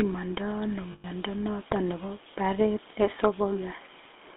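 Throughout, the speech has passed through the GSM full-rate codec, which rebuilds the voice from a vocal-tract model driven by sparse, regularly spaced pulses, at a rate that fits 13 kbps. The band sits between 250 Hz and 3.5 kHz, and the plainly audible codec damage gives a buzzy, gravelly roughness.

From 0.92 to 1.05 s, between "ndo ano" and "noton nebo", lost GSM frames were concealed by repeating the last good frame. The gap of about 120 ms, which fits six 20 ms frames, is heard as a rough, metallic ring sustaining the preceding sound.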